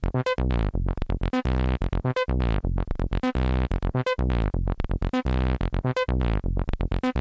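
No audible technical faults here.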